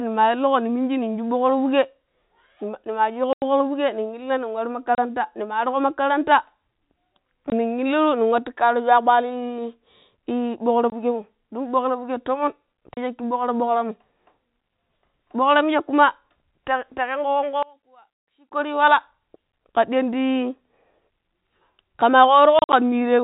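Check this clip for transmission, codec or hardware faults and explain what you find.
Two faults are audible: repeated packet loss filled with silence, and a brief level collapse most likely from one channel inverted.

Packet loss filled with silence: 3.33 to 3.42 s (90 ms), 4.95 s (30 ms), 7.50 s (20 ms), 10.90 s (20 ms), 12.94 s (30 ms), and 22.59 to 22.73 s, where 90 ms of gaps are scattered over 140 ms with a longest run of 50 ms. Missing packets were replaced by digital silence, so the sound drops out abruptly. The gap lengths fit 10 ms packets. On a waveform these are flat, near-silent stretches, and on a spectrogram they are blank vertical strips.

One channel inverted: From 17.63 to 18.51 s, the sound falls by about 27 dB to a faint residue. This is likely a polarity flip on one channel, so the shared centre content cancels when the channels are summed to mono. The waveform shrinks sharply for that span, and the spectrogram fades.

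The telephone-band G.711 coding leaves nothing audible above 4 kHz in any of this.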